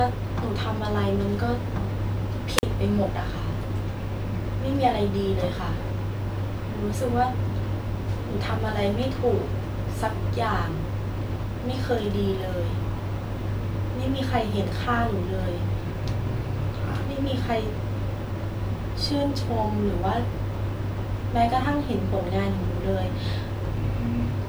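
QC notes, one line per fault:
2.57 to 2.63 s, wireless microphone squelch dropout: the radio link from the transmitter fades, so you get a quick lift of hiss before the receiver's squelch kicks in and mutes the output for about 44 ms, leaving a short hole in the speech before it comes back.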